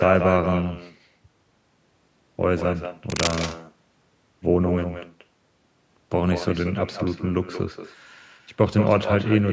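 Echo with no canceller runs throughout: the far end's loudspeaker feeds its microphone, so the speech returns about a fifth of a second later, a thin copy about 9 dB down. Cable scratch noise appears from 3.10 to 3.34 s, a dense, uneven rustle only slightly quieter than the speech, likely from a worn cable or connector shifting its contact resistance.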